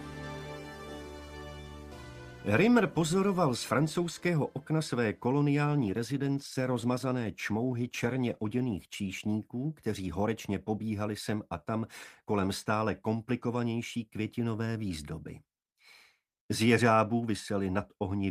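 From 5.66 to 9.65 s a call bitrate drop sets in. The encoder falls from 32 to 17 kbps, holding the lowest rate for about 2.7 s, so the audio turns coarse and muffled. A spectrogram shows the upper band thinning and smearing until full bandwidth returns.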